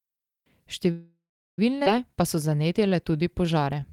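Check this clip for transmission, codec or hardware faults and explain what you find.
Three transmission faults are audible, all tied to network timing and jitter buffer behaviour.

From 0.91 to 1.59 s there is a call audio freeze: the last sound trails off as a fading buzz or hiss, then about 0.37 s of silence, likely from delayed packets draining the jitter buffer.

At 1.85 s a skip ahead occurs: roughly 0.4 s of audio is dropped and playback jumps forward, the two sides joined almost seamlessly.

From 2.11 s to the end, a jitter buffer slow-down repeats pitch periods to rebuild reserve, adding 203 ms and running at 89% speed with unchanged pitch and drawn-out sounds.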